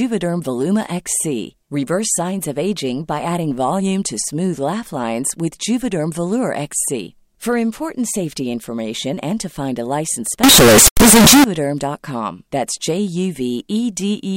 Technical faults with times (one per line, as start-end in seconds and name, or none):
10.43-11.44 float read as integer